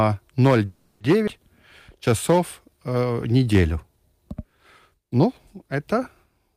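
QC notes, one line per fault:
0.65 to 1.02 s, call audio freeze: packets were likely held up in transit, so the jitter buffer ran dry and the receiver had nothing new to play. It filled the wait, about 350 ms, by carrying the last sound forward as a fading buzz rather than dropping to silence. When the packets arrived, the speech carried on from where it stopped, so nothing is lost. The freeze simply inserts a 350 ms hold and pushes everything after it later.
1.26 to 1.29 s, skip ahead: a stretch of speech was discarded while later audio was already queued, which sheds about 150 ms of delay. Roughly 150 ms of speech is gone, and the two sides are stitched together with only a 10 ms join. The result is an abrupt jump forward in the speech with almost no audible gap.
1.90 to 3.54 s, jitter buffer slow-down: the buffer was running low or had just raised its target delay, so the receiver built up a reserve by repeating single pitch periods and short bits of pauses many times over. 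Across this 1.6 s stretch it adds 143 ms, playing at about 92% speed with the pitch unchanged. Sounds come out drawn out and dragging.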